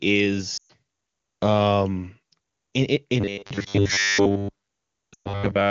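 At 0.57 to 0.72 s the speech quickly drops to near silence in a brief gap, then returns weak. These are lost AMR speech frames: about 120 ms failed, which fits six 20 ms frames, and the decoder stretched the last good sound with falling gain. From 3.21 s to the end at 5.70 s the audio turns into a rigid, metallic 100 Hz buzz that loosely tracks the words. This is robotic sound from repeated short buffers, likely from audio arriving too seldom, with a roughly 10 ms buffer looped over most of the stretch. Within that stretch, at 5.13 to 5.44 s, another run of lost AMR speech frames, again about 120 ms, quickly drops the sound to near silence before it comes back rough. The wideband AMR-WB coding itself adds at most faint damage.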